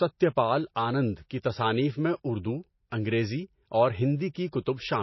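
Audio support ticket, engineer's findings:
Whole clip: nothing above 5.8 kHz. Dull top end, watery swirl on the speech, smeared attacks. Likely MP3 compression, with damage fitting about 24 kbps. Encoder short of bits cuts treble and zeroes weak lines frame to frame.

4.34 s: pre-echo. Short hiss, about 16 ms, just before an attack. Onset sounds soft. Same transform codec. Quantisation noise is spread over the whole block, so noise sized for the loud attack fills the quiet moment ahead.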